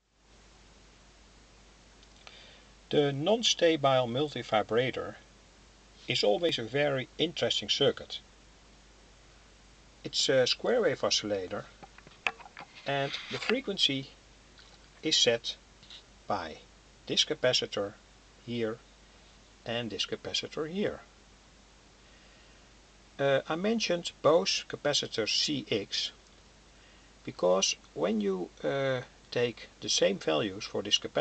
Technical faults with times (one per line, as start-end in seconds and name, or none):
none